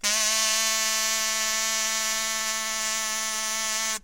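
No technical faults can be heard anywhere in the sound.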